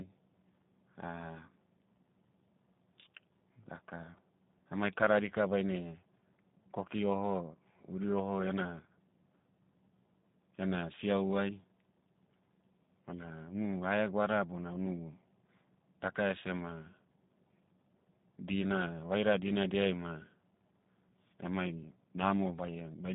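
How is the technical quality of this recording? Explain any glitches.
Thin, slightly rough and synthetic speech runs through the whole recording, with audible G.729 codec damage throughout. Nothing reaches above about 3.7 kHz and the low end stops near 150 Hz, so sibilants lose their edge and voices sound boxy. The cause is the G.729 codec, which fits an 8 kbit/s VoIP call. It does not carry the waveform itself. It rebuilds each 10 ms frame from a vocal tract filter, a pitch predictor and a few pulses, and that coarse model leaves the buzzy, artificial texture.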